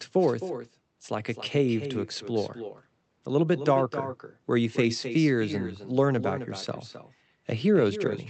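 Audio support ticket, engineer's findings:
Echo with no canceller, present throughout. Every phrase is followed by a quieter, thinner copy, about 11 dB down, roughly a third of a second later. Probable component: far-end loudspeaker feeding its microphone, with no cancellation, returned over the call. Band tops out near 8 kHz, fitting an Opus call path.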